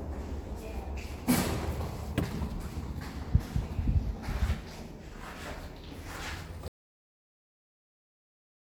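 A recording of sounds that suffers an audio dropout to silence at 6.68 s, lasting about 2.0 s to the end of the clip. The sound stops abruptly mid-flow and is replaced by digital silence with no room tone, most likely because the input was lost while the recorder kept writing silence. Unlike a fade-out or a noise gate closing, there is no gradual decay or residual background, just an instant drop to nothing.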